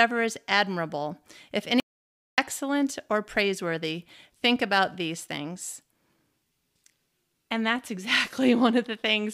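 A speech recording with an audio dropout to silence: right after "is admirable if", the sound cuts to dead silence from 1.8 to 2.38 s, likely a lost input feed recorded as silence.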